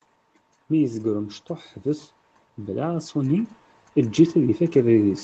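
From 0.77 s to the end, the speech and background swell louder together: automatic gain rising, as the gain control judged the input too quiet and slowly raised its gain.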